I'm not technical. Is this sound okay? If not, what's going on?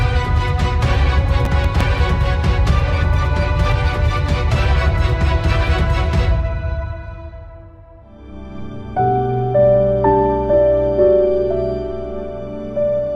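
No. From about 1.45 to 1.81 seconds, the computer processing the audio fell behind. It works in very small chunks, each lasting only a few milliseconds, and several chunks in a row weren't ready on time. Each time, a scrap of earlier audio was replayed in its place, with abrupt edges. That is processor overload crackle. You hear it as a short burst of gritty crackling over the sound, which stops once the computer catches up.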